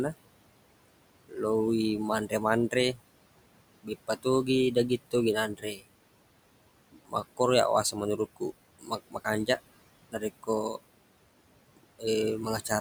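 Noise suppressor artifacts run through the whole speech clip. The suppressor pulls the steady room noise, which sits about 16 dB below the speech, down by about 21 dB in the gaps, then lets it back up under each phrase. That frame-by-frame, band-by-band suppression makes the residual noise pump with the talker.

Speech cut by the noise suppressor occurs five times. At 1.29 to 1.38 s, a brief fragment of about a tenth of a second dips by about 16 dB. Between 2.28 and 2.99 s, roughly 150 ms in total drops by about 14 dB. From 3.83 to 5.83 s, around half a second is pulled down by up to about 19 dB. The heaviest stretch is 6.92 to 9.59 s, where roughly half a second sinks by about 21 dB. From 10.12 to 10.77 s, about 150 ms falls by about 13 dB. In each case the suppressor mistook low-level parts of the speech for noise and attenuated them along with the background, so those parts sound swallowed or faint.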